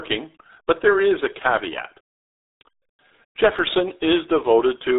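Speech runs through the RealAudio 14.4 codec for its whole length, and the damage is heavy. Nothing above about 3.8 kHz survives. The voice sounds muffled and gargly, with a wobbling, watery texture that fits a very low-rate coder of around 8 kbit/s. An ordinary telephone band-limit would also cut the top end near 3.7 kHz, but it would leave the voice clean and steady. Here the voice is smeared and bubbly, which marks a lossy speech codec rather than simple filtering. At 3.59 s there is a block of digital silence. The signal drops out for about 1.33 ms and comes back with no fade. The two hard edges merge into a single tick rather than an audible hole, and a gap that brief fits a 64-sample block left unfilled, likely because the output buffer was not written in time. It is told apart from the codec's own warble because it is a clean, instantaneous click on an otherwise continuous signal, not a tonal smear.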